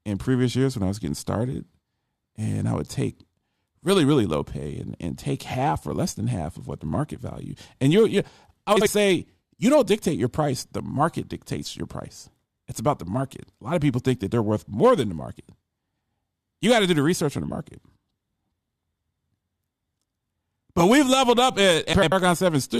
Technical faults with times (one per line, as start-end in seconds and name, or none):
8.76-8.87 frames out of order
21.93-22.12 frames out of order